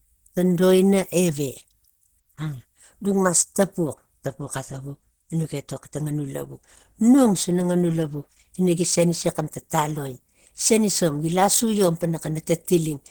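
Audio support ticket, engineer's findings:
Opus compression, throughout. Plainly audible hoarse, muffled speech with grainy, noise-filled highs reaching about 20.2 kHz. Likely an Opus encoder in hybrid mode, consistent with 16 kbps: SILK codes the low band, CELT fills upper bands with folded or noise energy.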